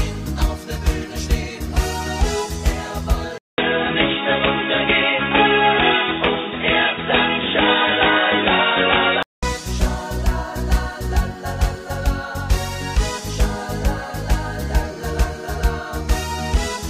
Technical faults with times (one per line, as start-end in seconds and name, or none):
3.38-9.43 input switched to a poorer device